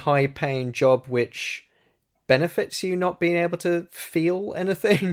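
No faults are audible anywhere in this speech recording.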